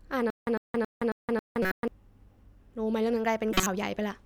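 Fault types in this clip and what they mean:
Stutter with silent gaps: From 0.30 s to 1.88 s the same 104 ms fragment of speech plays five times, once every 272 ms, with about 169 ms of dead digital silence after each repeat. The likely cause is a stalled stream replaying its last buffered piece at each retry before running dry. Unlike a corrupt frame, nothing new or foreign is heard, only an identical burst looping, and the speech that belonged in those gaps is lost.
Corrupt frame decoded: Two short bursts of misplaced spectral energy appear, one from 1.62 to 1.72 s peaking near -15 dBFS and a louder one from 3.51 to 3.67 s near -10 dBFS. Each spans only a few codec frames and sounds like a chirp or a smear of noise, because damaged bits made the decoder build wrong gains and frequencies. Unlike the stutter, these events don't repeat, and the sound they produce was never part of the speech.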